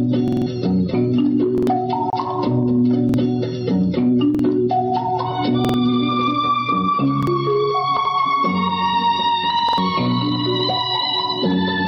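Repeated buffer at 0.28 to 0.46 s and 1.58 to 1.67 s: late audio forced the device to replay the last 46 ms block, fitting a 2048-sample buffer. It is heard as a hard-edged stutter.

Gap at a join of encoded pieces at 2.10 s: separately encoded segments were joined untrimmed, leaving a 28 ms gap before the sound resumes where it stopped.

Repeated buffer again at 3.09, 4.35, 5.65 to 5.74, 7.23 and 9.69 to 9.78 s: the same 46 ms block plays one or two extra times, each skipping roughly 50 to 100 ms of audio.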